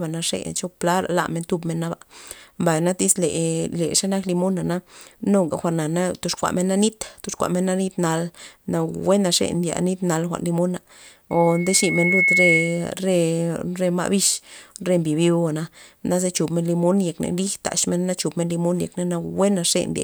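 A speech clip with loudspeaker feedback squeal from 11.30 to 12.90 s, right after "nal jwa'n limona": a 2.2 kHz tone swells over about a second to roughly 5 dB above the speech, the mic-to-speaker loop exceeding unity gain there.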